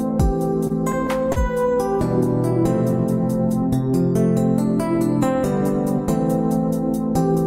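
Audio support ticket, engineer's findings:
Repeated stalls (stutter), 0.67–1.38 s: four brief holds, about 85 ms total, longest 37 ms; jitter buffer underrun. The audio drags rather than skips, with nothing lost, unlike packet-loss dropouts.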